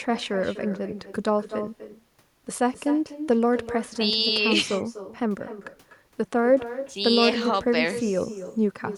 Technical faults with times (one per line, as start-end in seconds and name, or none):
0.00-8.97 echo with no canceller